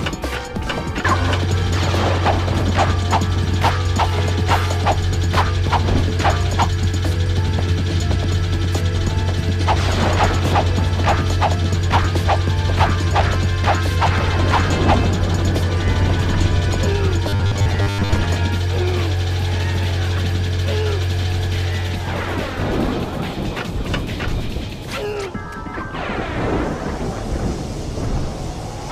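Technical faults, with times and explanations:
17.29 to 18.13 s, robotic sound from repeated short buffers. The sound becomes a rigid, metallic buzz at 100 Hz. Most of this stretch is replayed audio. The likely cause is late-arriving audio, with a 10 ms piece looped to fill the gap.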